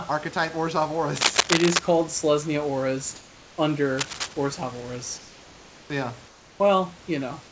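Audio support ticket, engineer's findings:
Cable scratch noise, 1.16–1.79 s and 3.98–4.33 s. Worn cable or connector likely changing contact resistance. Dense, uneven scratching over the speech: first burst louder than the speech, second quieter.

Comfort noise in place of the background, 3.16–3.58 s, 5.18–5.90 s, 6.28–6.60 s. Sender likely pausing transmission in gaps; receiver fills with steady synthetic noise, about 2 dB quieter, real room texture lost.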